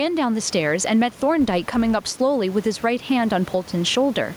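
Throughout the speech, the input gain is likely set far too high, so a fast limiter or compressor keeps clamping down on each loud syllable. The room noise sits about 29 dB below the speech, and the level swings by about 10 dB. Loud and quiet passages are squashed together.

From 1.40 to 2.20 s, a filter is restarted on every block, losing its memory and starting each block from silence. Each restart leaves a small transient, and they repeat at 172 Hz, which fits a 256-sample block. The result is a buzz that rises and falls with the level of the speech.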